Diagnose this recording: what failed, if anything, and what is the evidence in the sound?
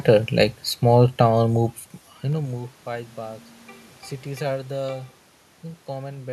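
Zipper noise from an unsmoothed gain stage in processing: from 1.64 to 2.98 s the speech falls about 20 dB in 2 dB jumps, roughly seven per second, each leaving a tiny click. A smooth fade lowers level without that rhythmic ticking.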